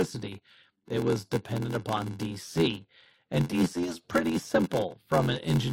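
Speech with a block size mismatch (padded) throughout: short gaps recur at 86.1 Hz, giving a steady buzz and a 0.861 speed, fitting shorter writes padded to a 512-sample read. Waveforms show regular notches; spectrograms show evenly spaced vertical stripes.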